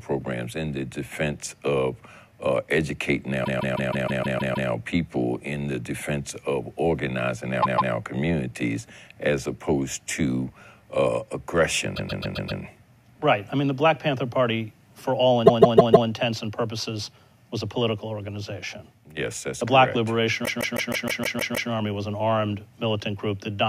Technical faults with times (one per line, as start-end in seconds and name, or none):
3.44-4.69 repeated frames
7.62-7.93 repeated frames
11.95-12.61 repeated frames
15.45-16.08 repeated frames
20.44-21.70 repeated frames